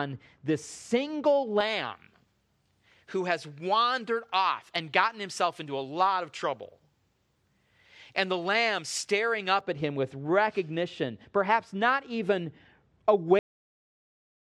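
From 1.60 s to 9.60 s the recording chain boosted the treble and the matching de-emphasis was never applied, so the pre-emphasis was left on. The shape of the lift fits a J.17 curve, leaving 10 kHz about 11 dB stronger relative to 1 kHz than it should be. Across those eight seconds the speech turns thin and overly bright, with sibilants hissing sharply, before the tonal balance returns at 9.60 s.

At 13.39 s the final stretch of audio was never written out or played, which is a cut-off end. The speech stops partway through a sound and falls straight to digital silence with no natural decay or tail, and that silence runs to the end of the clip. To the ear it is an abrupt amputation rather than a finished phrase.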